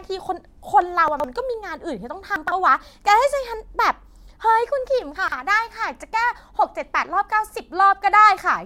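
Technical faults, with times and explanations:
1.08–1.24 s, 2.36–2.52 s, 5.16–5.32 s: chunks out of order. Each is a brief jumbled moment, as one 40 ms chunk plays three chunks late, leaving three hard joins.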